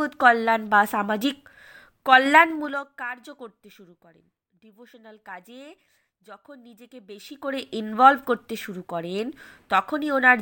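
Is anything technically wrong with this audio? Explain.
Yes. Zipper noise occurs from 2.42 to 2.88 s. The speech is brought down by roughly 20 dB, but the gain moves in unsmoothed 2 dB jumps, around twenty per second, instead of gliding. Each jump is an instant discontinuity in the waveform, so it lands as a tiny click. The run of clicks gives a ticking, zipping texture over the speech while the level falls.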